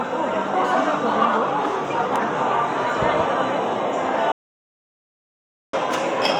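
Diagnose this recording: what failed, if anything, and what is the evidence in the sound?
An audio dropout to silence runs from 4.32 to 5.73 s. The sound cuts to silence for 1.4 s, with no room tone. It is likely a lost input link.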